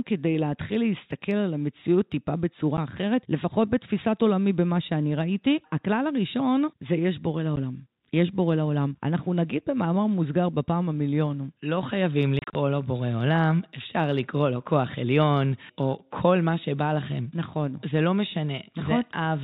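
At 2.77 s and again at 7.56 s, packet loss filled with silence cuts a tiny hole in the speech. Each gap lasts about 10 ms, which fits a single lost 10 ms packet. The receiver played nothing in its place, so the edges are hard. From 12.39 to 12.55 s the losses cluster. About 100 ms goes missing across that span, with the longest run near 30 ms. The speech has several short holes there. The narrow G.711 telephone band is audible throughout.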